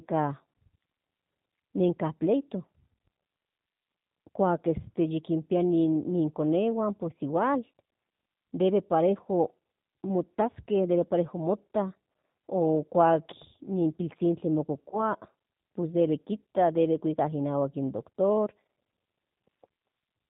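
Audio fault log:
throughout: G.729 codec. The speech has been squeezed through a low-bitrate VoIP codec, which fits an 8 kbit/s G.729A stream. The encoder models each 10 ms frame as a vocal tract filter, a pitch predictor and a few pulses. The decoder rebuilds speech from that model instead of the original waveform, so the codec damage is plainly audible. The speech has a rough, slightly synthetic texture, and nothing above 4 kHz passes, so sibilants and breathiness sound dull.
14.91 to 14.98 s: VoIP packet loss concealed by the speech codec. A short gap in the packet stream, which fits a single lost 10 ms frame, forced the decoder to fill in from its last pitch and filter settings at reduced gain. That fill is heard as a brief buzzy or noisy smear where the speech should continue. Each G.729 frame depends on the state left by the one before, so the speech stays weakened or distorted for tens of milliseconds after real packets resume, which stretches the blemish to about 70 ms.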